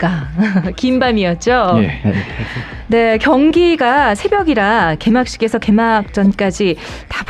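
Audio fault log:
No audible faults detected.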